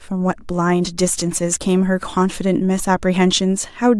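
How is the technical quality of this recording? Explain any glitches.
No glitches can be heard anywhere in this speech recording. Nothing interrupts or disturbs the sound at any point, so there is nothing to explain.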